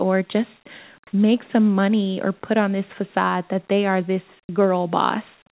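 At 4.47 to 4.49 s, just after "that they are this", the next word starts abruptly, its soft beginning missing and roughly 20 ms replaced by a faint steady hiss. This is likely an onset clipped by the voice detector, which reacted late, so comfort noise filled the gap.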